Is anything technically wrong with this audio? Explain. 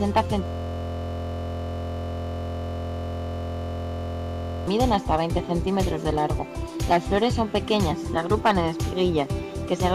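Yes. System hang loop from 0.46 to 4.67 s: a frozen system left the hardware replaying one 23.22 ms buffer, fitting 1024 samples, heard as a steady 43 Hz buzz.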